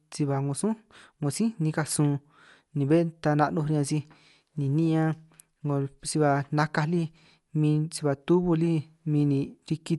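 From start to finish the speech sounds dull and rough, with a fluttering, grainy noise clinging to voiced sounds. On a spectrogram the energy stops flat at about 11.5 kHz, and the upper bands look patchy, with speckled noise filling gaps between harmonics. This is likely Dolby Digital compression at a low bitrate, consistent with around 64 kbps: the encoder narrowed the band and starved many frequency lines of bits, leaving the decoder to pad them with noise.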